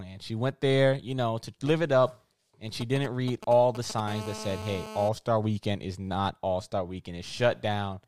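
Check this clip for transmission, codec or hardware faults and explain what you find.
Two related hardware faults appear, both caused by a 2G mobile phone transmitting near the audio circuitry.

From 2.81 to 4.00 s there are GSM signalling bursts. A nearby phone sent short clusters of radio pulses while negotiating with the network, and the audio circuit rectified them. The result is a galloping dit-dit-dit of brief 217 Hz buzzes, roughly 10 dB below the speech.

From 4.08 to 5.09 s there is GSM phone buzz. The phone was now in a call, transmitting steadily at 217 bursts per second, and the circuit demodulated that pulse train into audio. This produces a hard, raspy, harmonic-rich 217 Hz buzz at about 12 dB below the speech, unrelated to the speech itself.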